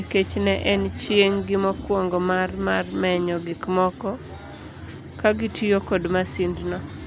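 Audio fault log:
Nothing in this speech recording stood out as a problem on listening.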